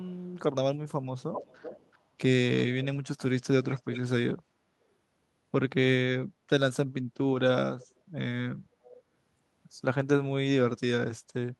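A faint, delayed copy of the speech trails it at 0.04–0.31 s, 1.19–1.98 s, 2.59–2.85 s, 3.64–4.01 s, 7.79–7.87 s and 8.85–9.0 s. It is clearest in the three stretches from 1.19 s to 4.01 s and arrives 384–432 ms late. This is echo leak, likely from a loudspeaker whose echo canceller let residue back.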